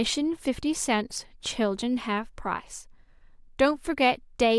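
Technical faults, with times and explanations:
No technical faults are audible anywhere in this speech recording.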